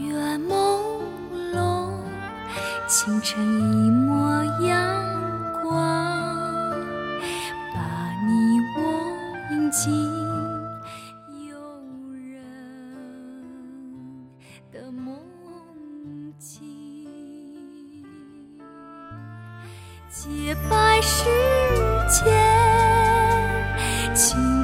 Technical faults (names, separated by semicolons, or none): zipper noise